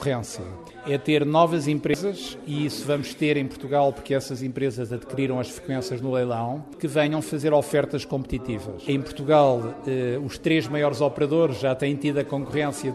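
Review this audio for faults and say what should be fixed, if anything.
Damaged data in a compressed stream at 1.91 to 1.94 s: a brief glitch lasting about 30 ms, where the decoder misreads corrupted frames, loses sync and resumes at the next frame header. Verify stream integrity with checksums or resend corrupted frames before decoding.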